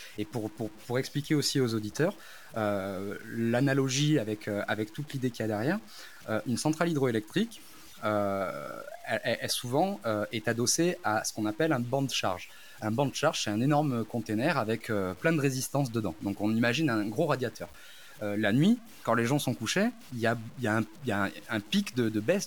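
Grainy, gritty distortion rides on the speech from start to finish, rising and falling with it, and the quietest moments sputter or drop out. The likely cause is low bit depth without dither: samples truncated to about 7 bits, leaving error roughly 25 dB below the signal.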